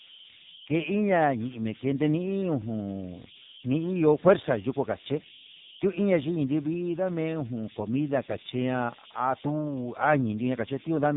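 A delta-sigma converter working without dither has fallen into repeating bit patterns throughout this speech clip. These converter idle tones surface as a whistle around 3 kHz in the pauses and as grainy noise under quiet passages, sitting about 16 dB below the signal. The speech has also been squeezed through the AMR narrowband mobile codec, with nothing passing above 3.8 kHz. Its pulse-driven vocal-tract model is starved of bits here, which points to one of the lowest AMR-NB rates, near 6 kbps. The voice comes out heavily buzzy and synthetic.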